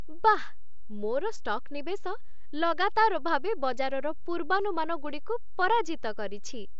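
From start to finish there's a DC offset: the whole waveform sits shifted off zero, inaudible itself but eating headroom and parking steady energy at the very bottom. The speech tops out around 7.7 kHz, as the mSBC headset path would give.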